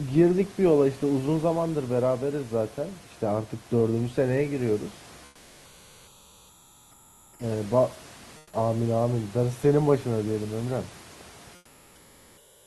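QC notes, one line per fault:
5.27–7.39 s, 8.39–8.51 s and 11.55–12.66 s, comfort noise in place of the background: in these pauses the real room noise, sitting about 26 to 28 dB below the speech, gives way to a smooth, featureless hiss about 5 to 7 dB quieter, lasting 2.12 s, 120 ms and 1.11 s. The likely cause is Opus discontinuous transmission, with the receiver synthesising rough stand-in noise until speech returns. The last stretch runs to the end.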